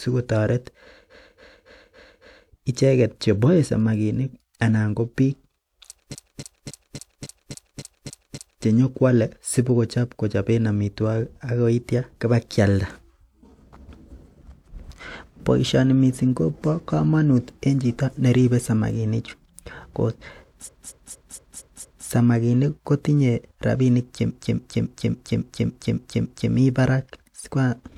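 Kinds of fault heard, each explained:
Repeated frames: a short block of the compressed stream got played over and over, so the speech stutters on the same fraction of a second. It happens four times, around 1.1 s, 6.1 s, 20.6 s and 24.3 s. Each block is about 0.28 s, or 0.23 s in the third case, which fits a run of five or six frames. The block repeats five to nine extra times, stretching the audio by roughly 1.4 to 2.5 s at each spot.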